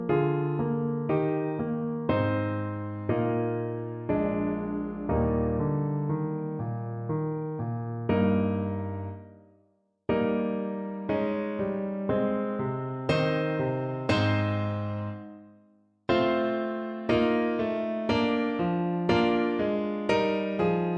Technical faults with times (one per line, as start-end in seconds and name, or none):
none